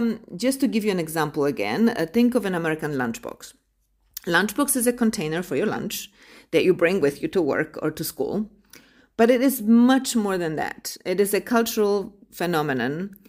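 Nothing technical goes wrong anywhere in this speech recording, so there's no fault to point to at any moment.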